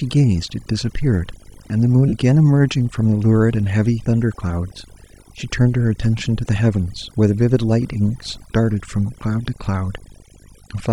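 A speech recording with faults running throughout. Video or display buzz sits under it at 50 Hz, with hash above, roughly 25 dB below the speech. A screen or video cable is coupling into the audio. Overdone noise removal has left the background lowered and broken up into twinkling specks. Quiet parts of the voice were cut along with the noise. At 2.08 s, lost LE Audio frames break up the speech for about 45 ms, until 2.14 s. The decoder repeats the last spectrum with random signs, so the tone smears into noise. The gap's length fits a run of about six lost frames.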